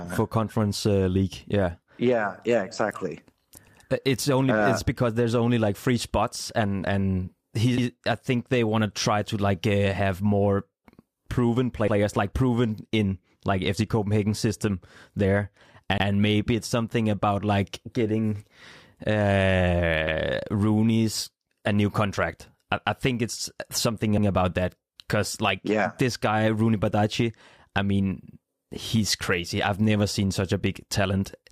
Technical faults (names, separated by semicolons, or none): overlapping chunks